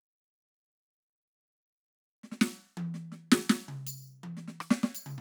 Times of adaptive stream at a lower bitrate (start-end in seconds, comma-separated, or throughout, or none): none